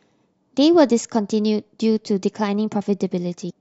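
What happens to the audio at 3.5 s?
Damaged data in a compressed stream, from 3.46 to 3.51 s: corrupted bytes make the decoder lose sync and hunt for the next frame, giving a brief glitch.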